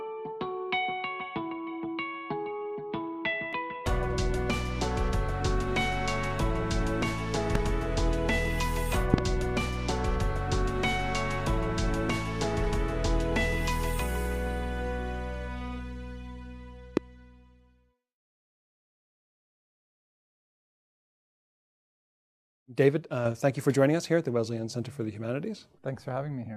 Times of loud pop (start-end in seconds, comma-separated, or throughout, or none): 7.55-7.57, 9.14-9.20, 16.97-16.99